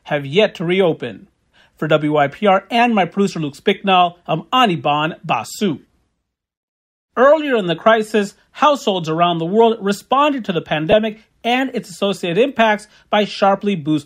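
At 10.92 s, right after "world responded to the", there's a lost LE Audio frame, about 10 ms, fitting a single frame; the decoder patches it with a brief noisy smear.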